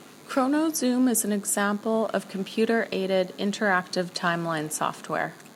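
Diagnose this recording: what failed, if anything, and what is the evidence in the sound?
A thin, steady buzz at 100 Hz with many harmonics sits well below the speech throughout: DECT cordless phone buzz, with 10 ms radio bursts rectified in the analogue circuitry.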